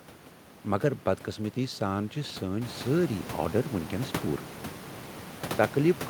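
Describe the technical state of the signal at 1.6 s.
At 1.6 s the signal is intact, with no dropout, distortion or other technical fault at that point.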